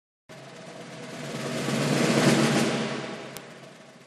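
A single bit error spike sits at 3.37 s in this short piece of audio, heard as one sharp, dry tick that has nothing to do with the surrounding sound. A flipped bit in memory or on a digital link has thrown two adjacent samples far off their true values, peaking at about -10 dBFS before snapping straight back. On a waveform it appears as a lone needle; on a spectrogram, as a thin vertical line running the full height of the frequency axis.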